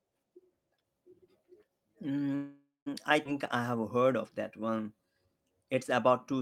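At 2.35 s the speech stops and the last sound carries on as a fading buzz that sinks to silence for about 180 ms before the speech resumes at 2.88 s, with nothing lost. This is a call audio freeze, likely from delayed packets draining the jitter buffer, which inserted roughly half a second of filler.

From 3.24 to 3.27 s the speech lurches abruptly forward, joined almost seamlessly, with about a fifth of a second of material gone. This skip ahead is audio discarded while later packets were already queued.

From 3.57 to 4.08 s and again from 4.60 to 5.27 s the speech drags, with sounds stretched but the pitch unchanged, to 88% and then 85% of normal speed. These are jitter buffer slow-downs: the receiver repeated pitch periods to rebuild its reserve, adding 66 ms and 110 ms.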